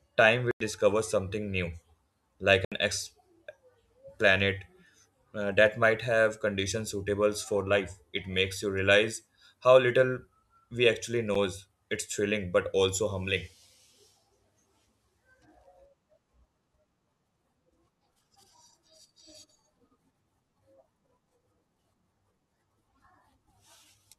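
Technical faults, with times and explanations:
0.51–0.60 s, 2.65–2.72 s and 11.34 s, block of digital silence: sound drops to silence for 93 ms before "something new" (fitting a 4096-sample buffer), 70 ms, then 10 ms after "how little we actually". Waveforms show flat lines, spectrograms blank columns edged by broadband streaks.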